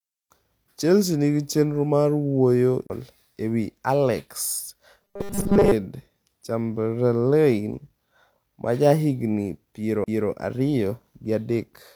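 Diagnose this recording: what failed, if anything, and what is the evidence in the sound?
CD skip at 2.87–2.90 s and 10.04–10.08 s, just after "ma jahigni": brief mutes of a few tens of milliseconds, then speech resumes elsewhere as the laser jumps tracks during playback.

Robotic sound from repeated short buffers, 5.02–5.73 s: a rigid 200 Hz buzz over the speech, likely a driver or buffer stage repeating 5 ms blocks for most of that stretch.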